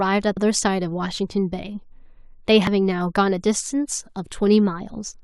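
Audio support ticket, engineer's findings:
Two short blips at 0.37 s and 2.67 s, each just a few milliseconds. Looks like damaged data in the compressed stream: decoder hits bad bytes, drops sync, hunts for the next frame header, and you get that quick blip.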